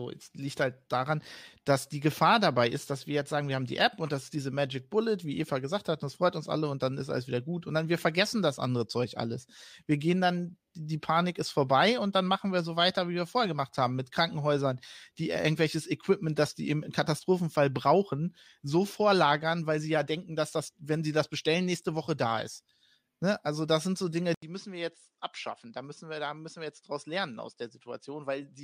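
At 24.34 s there's an 80 ms gap, then the speech drops about 10 dB, loses everything above 10.5 kHz and gains faint background noise: likely an input switched to a poorer device.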